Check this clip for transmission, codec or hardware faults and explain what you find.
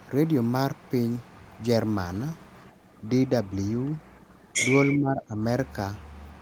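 Two echo-canceller faults are audible. Speech suppressed in double talk occurs at 3.01–3.08 s (roughly 5 dB) and 4.93–5.41 s (around 15 dB), likely from the canceller ducking overlapping talk, leaving faded spectrogram bands. Background gated by the echo canceller at 4.28–4.43 s cuts room noise about 6 dB, visible as a brief notch in the waveform's noise floor.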